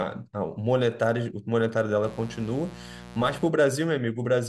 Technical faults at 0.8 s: none

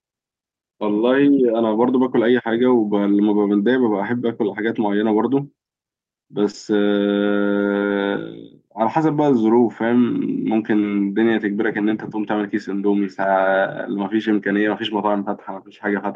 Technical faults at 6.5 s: short concealed packet loss; lost packet rebuilt from error correction

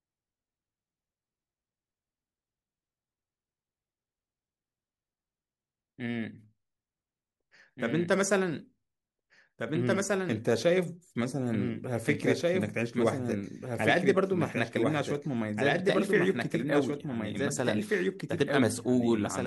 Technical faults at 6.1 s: doubled audio track

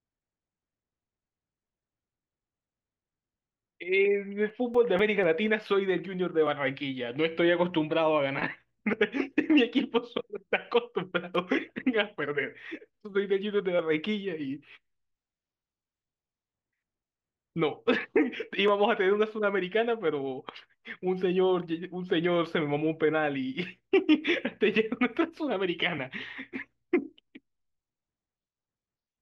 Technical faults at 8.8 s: none

